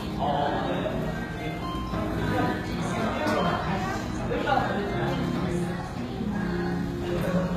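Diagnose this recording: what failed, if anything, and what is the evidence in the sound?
The fault sits at the codec stage and runs through the whole recording: it is most likely HE-AAC compression at a low bitrate, around 20 kbps. The damage is plainly audible. The treble stays bright but sounds gritty and metallic, because it is rebuilt rather than coded. Spectral band replication copies lower bands upward under a coarse envelope, so the harmonics do not line up across the crossover. On a spectrogram the upper region looks like repeated blocky patches of lower-band texture, with nothing at all above about 14.9 kHz.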